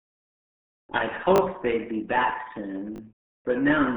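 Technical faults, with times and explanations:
Throughout: RealAudio 14.4 codec. The speech sounds muffled and gargly, with nothing above 3.8 kHz; heavy 8 kbit/s dial-up-era compression strips the upper band and smears detail.
1.36–1.40 s and 2.96–3.00 s: repeated buffer. Each is a brief buzzy stutter, as one 20 ms chunk plays twice more with hard joins while fresh audio arrives late.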